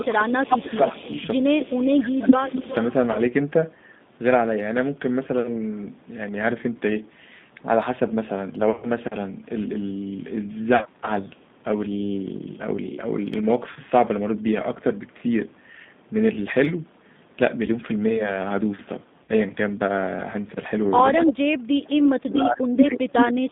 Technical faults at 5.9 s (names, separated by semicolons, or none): G.729 codec